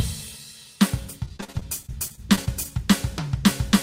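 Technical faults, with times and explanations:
1.25–2.72 s, repeated packet loss (robotic sound): the music turns choppy and robotic as a rapid train of short holes opens up, the longest about 41 ms. Each hole is papered over by extending the last fragment of sound, about 269 ms of patching in total, roughly a fifth of the stretch, while about 220 ms goes missing outright. Unlike a single dropout or plain silent gaps, the stretched fill is what gives the buzzy, robotic colour.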